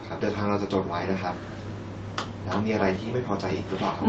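No technical faults are audible.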